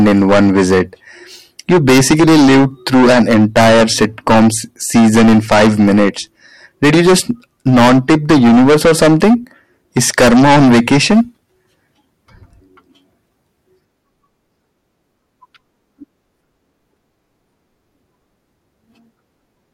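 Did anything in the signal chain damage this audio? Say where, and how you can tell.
Yes: hard clipping at 0–0.81, 1.70–4.56, 4.95–6.09, 6.83–7.31, 7.67–9.34 and 9.97–11.21 s, overdriven by about 16 to 23 dB. Flat-cut peaks give harsh high fuzz, not soft saturation's warmth.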